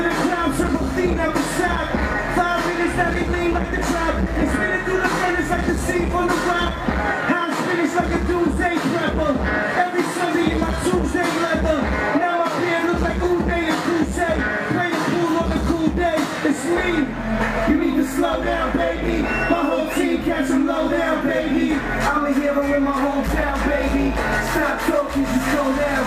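No technical faults are audible anywhere in the recording.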